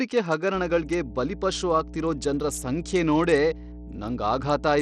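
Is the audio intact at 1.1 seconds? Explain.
No. Mains hum runs from 0.54 s to the end of the clip, so it covers 1.1 s: a steady 60 Hz tone at around 15 dB below the speech, leaking in from the power line, probably through a ground loop or nearby transformer.

Bluetooth SBC compression, which is likely the cause of the damage heard, spans the whole clip. A low-bitrate link leaves the upper sub-bands starved of bits and coarsely quantises the rest, so the treble flickers, nothing survives above 18.5 kHz, and a gritty, aliased texture sits on the speech.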